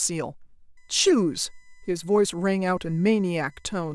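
Speech clip with USB whine from 0.77 s to the end. The steady tone sits on a 1 kHz series, strongest at 2 kHz, about 40 dB below the speech. Its pitch fits USB's 1 ms frame rate leaking through power or ground.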